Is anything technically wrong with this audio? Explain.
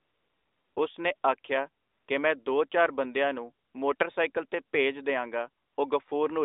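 Yes. The speech has AMR comfort noise in its pauses. At 0.00–0.76 s, 1.16–1.24 s, 1.84–2.08 s (after "ਉਸ ਨੇ ਆਖਿਆ", before "ਕਿ ਮੈਂ ਦੋ ਚਾਰ"), 3.66–3.74 s (after "ਦੋ ਚਾਰ ਬੰਦਿਆਂ ਨੂੰ"), 3.96–4.00 s (before "ਤੇ ਭੇਜ") and 5.64–5.78 s, the real background gives way to a smooth, even hiss that switches in and out. This happens because the phone treated these gaps as silence and stopped sending speech frames. The receiver then filled each gap with synthetic noise built from a rough description of the background's level and spectral shape. Within the mobile link's 300 Hz to 3.7 kHz band, the codec damage to the speech itself is light.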